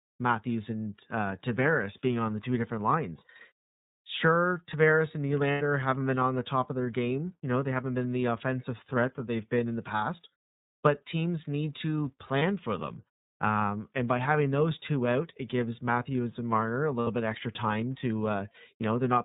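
Speech clip running through the iLBC codec the whole way: nothing above 4 kHz, and a plainly audible rough, slightly synthetic edge, which fits the 30 ms frame mode at around 13 kbps. On top of that there are lost iLBC frames at 5.52 to 5.61 s (about 90 ms), 12.39 to 12.42 s (30 ms) and 17.01 to 17.07 s (60 ms). Each gap turns into a brief held, buzzy vowel as the decoder repeats the last pitch cycle with some noise. Because each iLBC frame decodes independently, the voice snaps straight back afterwards.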